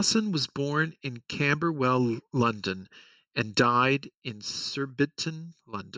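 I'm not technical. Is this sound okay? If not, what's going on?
No. Channel delay (comb filtering) runs throughout: one side arrives about 0.7 milliseconds late, so combining the sides cancels certain pitches, making the speech sound hollow.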